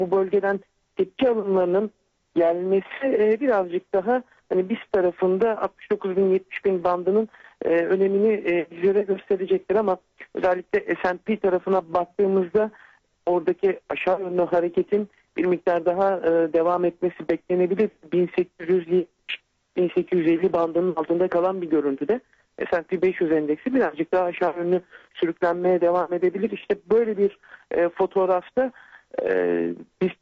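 No technical faults can be heard anywhere in the signal, which keeps a steady, intact level and continuity throughout.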